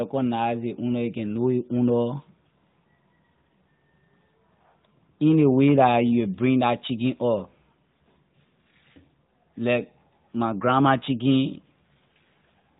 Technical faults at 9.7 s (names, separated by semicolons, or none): none